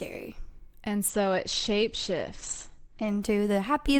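From 1.08 to 3.08 s an adaptive stream at a lower bitrate cuts treble abruptly; spectrogram shows a flat 8.6 kHz ceiling, no waveform gap.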